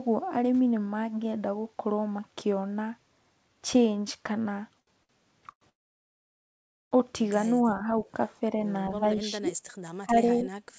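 Right around 4.80 to 4.89 s, and again from 5.03 to 5.11 s, you get a short stall from a late packet. The jitter buffer ran dry, so the receiver held the last sound for 72 ms and then 60 ms, giving a stretched moment before picking up exactly where it left off.

Then come two call audio freezes: a brief one from 5.51 to 5.63 s, and a long one from 5.69 to 6.93 s. Packets were likely held up in transit, so the last sound trails off into roughly 1.2 s of near-silence before the audio resumes intact, just later.

From 7.56 s on, there's speech suppressed in double talk, with the echo canceller likely pulling the talker down while the far side is active. It hits 7.56 to 8.05 s (dips of about 10 dB), 8.50 to 8.63 s (about 5 dB), 9.00 to 9.51 s and 10.00 to 10.51 s (about 20 dB), and 10.68 s to the end (about 25 dB).

Inside the 10.00 to 10.51 s stretch, at 10.37 to 10.42 s, there's a brief echo leak: a faint copy of the voice arriving 282 ms late, about 25 dB down. 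That's likely the far end's loudspeaker bleeding past its canceller. Throughout, nothing sits above 8 kHz, which fits a wideband call codec like G.722.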